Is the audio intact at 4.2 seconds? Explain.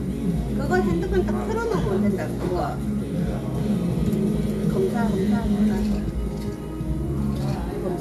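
No. At 4.2 seconds a doubled audio track is playing: the same full-band sound is heard twice, with a second copy trailing roughly 400 ms behind at about 5 dB quieter. The copy carries no decay or room colour, and it cuts in and out abruptly, spanning 3.58 to 5.92 s. The likely cause is the audio being captured again through a slower path, or an edit leaving two copies out of step.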